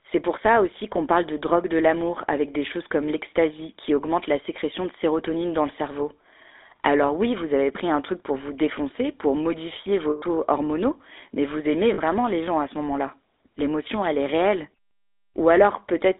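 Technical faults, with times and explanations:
Throughout: GSM full-rate codec. The speech has a plainly audible buzzy, gravelly roughness, because the codec rebuilds the voice from a vocal-tract model fed by sparse, regular pulses. The line passes only about 300 Hz to 3.6 kHz, which fits a 13 kbps GSM full-rate link.
10.10 to 10.23 s, and 11.94 to 11.99 s: lost GSM frames. After "vous défoncer pour modifier" a gap of 120 ms, about six frames, is filled by repeating the last good frame. After "hormonaux mais vous aimez" a 40 ms gap, about two frames, is filled the same way. Both give a brief rough, metallic ring.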